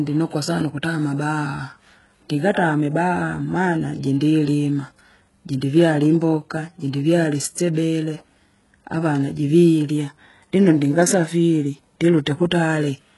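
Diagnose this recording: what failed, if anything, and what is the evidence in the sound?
The failure is at the codec stage, and it runs the whole clip. The top end sounds bright but synthetic, and s sounds come out gritty and a bit lispy, with nothing at all above about 11.5 kHz. That's likely HE-AAC compression at a very low rate, something like 12 kbps, with heavy damage. The codec keeps only the lower spectrum and fakes the treble by copying bands upward under a coarse envelope, so the harmonics up there don't line up with the real signal.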